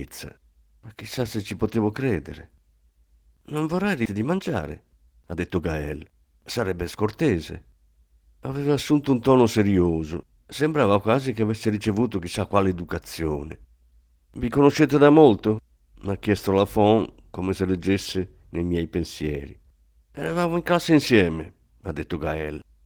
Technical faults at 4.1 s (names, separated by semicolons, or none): skip ahead; jitter buffer speed-up